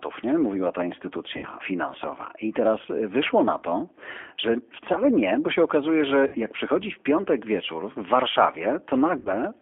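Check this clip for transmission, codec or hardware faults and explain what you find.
Two faults are audible: codec damage throughout, and three brief concealed packet losses.

G.729 codec, throughout: band-limited to roughly 300 Hz to 3.4 kHz, with the rough, synthetic texture of 8 kbit/s model-based coding. That texture separates it from a merely narrowband line.

VoIP packet loss concealed by the speech codec, at 1.37–1.48 s, 6.27–6.38 s and 9.19–9.34 s: about 60 ms lost each time, which fits three lost packets. The decoder extends its last pitch and filter into a fading buzzy tone or coloured noise, with no silent gap, and the audio stays weak briefly afterwards.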